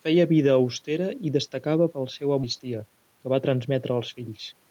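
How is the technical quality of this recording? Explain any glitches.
The recording has two glitches.

At 2.43 to 2.45 s, a skip ahead drops roughly 0.7 s of queued speech without a gap. The waveform shows an abrupt splice where the spectrogram content changes instantly.

From 2.59 to 4.54 s, a jitter buffer speed-up trims repeated pitch-period slices, totalling about a fifth of a second. Speech runs at 109% with unchanged pitch, and the harmonics look compressed in time.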